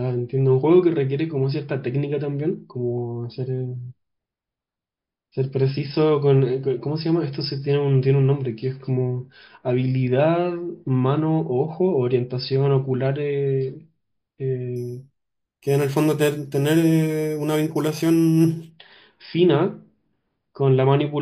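From 14.76 to 18.71 s there is imaging from sample-and-hold upsampling. The 11 kHz audio was raised to 44.1 kHz by repeating samples without smoothing, so mirrored spectra about 23 dB down, starting between 5.5 and 11 kHz, add a bright metallic fizz that tracks the speech.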